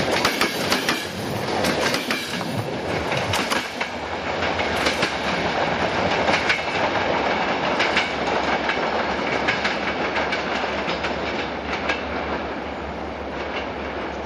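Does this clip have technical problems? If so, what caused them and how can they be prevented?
No, the signal holds steady throughout, with no technical faults to report and nothing that calls for a preventive fix.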